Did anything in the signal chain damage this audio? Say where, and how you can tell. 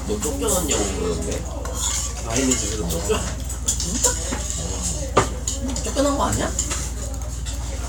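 No, nothing in the signal chain damaged this audio.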